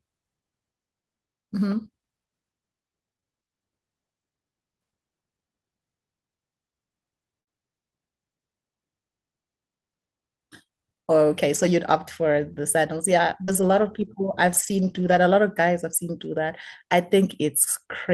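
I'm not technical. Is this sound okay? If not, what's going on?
No. The speech was sent over a network connection that dropped pieces of it, and the receiving end had to cover the holes.

Repeated packet loss (robotic sound) happens from 3.13 to 3.25 s. Three small chunks went missing in quick succession, about 60 ms in all, and each was patched by stretching the previous sound. The result is a brief choppy stutter.

A burst of packet loss happens from 7.41 to 7.49 s. About 60 ms of speech was lost in one go, and the receiver filled it by holding the last sound while fading it down. You hear a short buzz or hiss, then the speech jumps ahead.

Lost packets rebuilt from error correction occur at 11.55 to 11.69 s, 12.53 to 12.59 s, 13.48 to 14.07 s and 14.47 to 15.17 s. Pieces went missing here too, but backup copies carried in later pieces filled them, so there's no gap. Those copies are lower quality, so the speech turns rougher and noisier.

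Short concealed packet loss happens from 13.45 to 13.53 s. About 40 ms never arrived in time, and the receiver guessed at it by continuing the sound before it. This produces a quick smear or wobble, and a short consonant can disappear.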